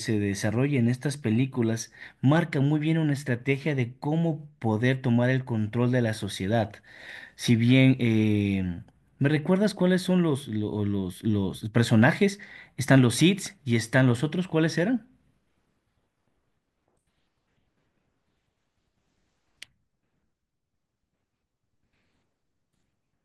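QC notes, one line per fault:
No faults were found in this speech recording. Nothing in it calls for a QC entry.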